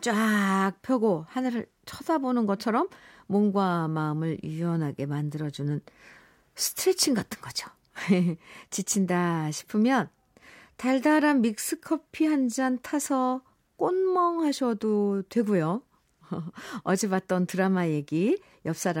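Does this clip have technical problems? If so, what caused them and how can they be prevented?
No, the speech in this clip has no technical faults. With nothing going wrong in the recording or its handling, no cause needs tracing and no prevention is called for.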